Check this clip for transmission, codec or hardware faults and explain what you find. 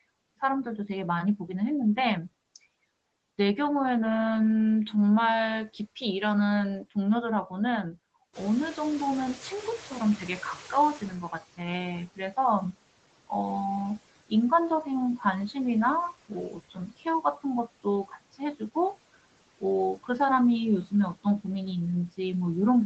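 The faults here come from the call's noise suppression rather than from transmission or hardware, and they show up in three ways.

Noise suppressor artifacts run through the whole clip: the background pumps down between phrases and rises under the speech, because each frame's noise bands are cut by about 18 dB.

Noise suppressor catching up, from 8.33 to 11.4 s: the room noise jumps by about 16 dB near 8.5 s and leaks through before sinking. The estimate needs 3.07 s to adapt, then cuts about 14 dB.

Speech cut by the noise suppressor, at 16.5–17.06 s and 18.08–18.4 s: parts of the speech sound swallowed, around a fifth and a tenth of a second in total. The suppressor mistook them for noise, dropping them by about 14 dB and about 12 dB.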